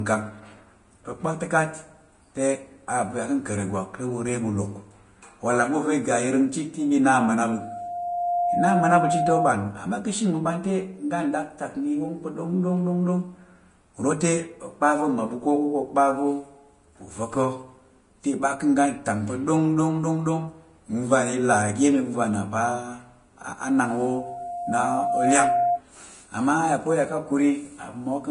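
From the start, the speech sounds hissy and grainy. Nothing is heard above 10.5 kHz. Sibilants turn to rough noise, and attacks smear. This is likely Vorbis compression at a low setting, which fits a bitrate around 32 kbps. The codec keeps a smooth outline of the spectrum. It codes the detail on top so coarsely that the treble becomes noise, and it discards everything above the cut-off. The damage is plainly audible for the whole clip.

At 7.21 s a loudspeaker feedback squeal begins. A pure tone at 702 Hz swells up over about a second and lasts until 9.73 s. It sits roughly 5 dB above the speech. A second squeal at the same 702 Hz runs from 23.63 to 25.81 s. It builds more slowly, over about one and a half seconds. In both, the microphone picks up its own loudspeaker. At 702 Hz the loop gain exceeds one, so that frequency feeds itself and grows.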